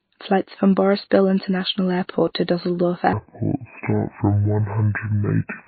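A speech recording was most likely squeezed through MP3 compression at a very low bitrate, plausibly around 24 kbps, so the encoder ran short of bits. Throughout, weak detail flickers in and out with a watery, swirly texture. From 3.13 s to the end at 5.68 s, a section at the wrong speed plays at 0.59 times its recorded rate, likely from being fitted to the wrong clock. It drags slow and drops roughly ten semitones lower in pitch.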